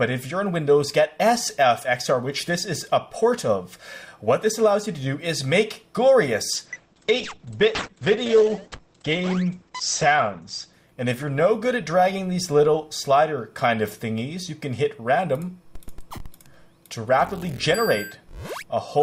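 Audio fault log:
6.52–13.11 s, call bitrate drop: the encoder was starved of bits, which fits a fall toward 10 kbps, so the sound turns coarse, watery and muffled above 8 kHz.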